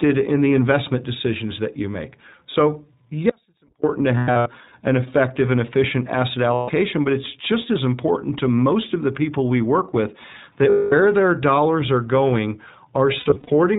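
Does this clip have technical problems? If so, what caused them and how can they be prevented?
Yes. This speech clip has three kinds of fault.

The whole clip passes through the iLBC codec, and the damage is plainly audible. Nothing above 4 kHz survives, so sibilants lose their hiss, and because each short frame's excitation is coded on its own, the speech has a rough, slightly synthetic grain. The sound fits iLBC's 15.2 kbps mode with 20 ms frames. On a spectrogram, energy stops at a flat ceiling at 4 kHz for the full length. Using a wideband codec such as Opus would prevent this.

An audio dropout to a faint residue runs from 3.30 to 3.84 s, about 540 ms. The signal cuts out abruptly, and only a faint trace about 35 dB below normal level remains until it returns just as sharply. The likely cause is a brief loss of the source feeding a path that stayed live. The waveform collapses to a thin sliver with vertical edges, and the spectrogram goes nearly blank between them. 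Secure connections and a stable source would prevent it.

Lost iLBC frames occur at 4.18 to 4.48 s, 6.54 to 6.70 s, 10.70 to 10.93 s and 13.20 to 13.50 s. The decoder fills each gap by repeating the last pitch cycle mixed with noise, which sounds like a held, buzzy or breathy vowel. The speech recovers almost immediately afterwards because each frame stands alone. The first and last events are scattered losses over about 280 ms, with the longest run around a tenth of a second or less. The middle two are solid blocks of 140 and 220 ms. On a spectrogram these appear as smeared, unchanging harmonic bands. Reducing packet loss with a better network path, jitter buffering or forward error correction would prevent them.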